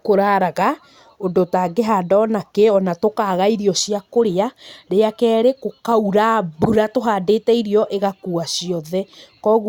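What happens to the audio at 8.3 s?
Nothing goes wrong at 8.3 s; the speech there plays through intact, with no dropout, click or distortion.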